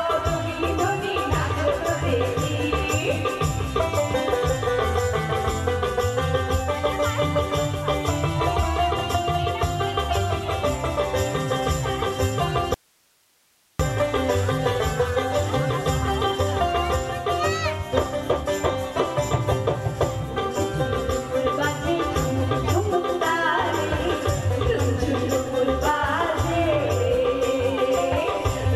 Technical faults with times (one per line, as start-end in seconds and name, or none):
12.74-13.79 audio dropout to a faint residue